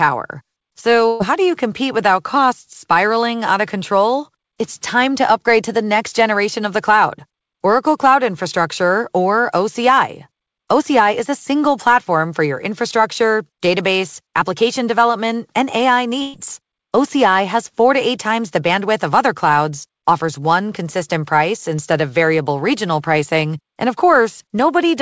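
At 1.08 to 1.22 s, and again at 16.22 to 16.36 s, there's a burst of packet loss. Roughly 120 ms of audio never arrived in time, and the receiver papered over it by stretching out the last bit of sound and letting it fade, so you hear a short smeared buzz or hiss instead of a dropout. When the audio comes back, it has skipped ahead past the missing stretch. Above 8 kHz nothing comes through, which fits a wideband call codec like G.722.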